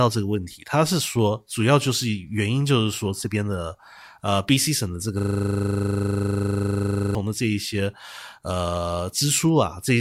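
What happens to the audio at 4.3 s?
Nothing goes wrong at 4.3 s; the speech carries on intact through that moment, with no break, click or change in level or tone.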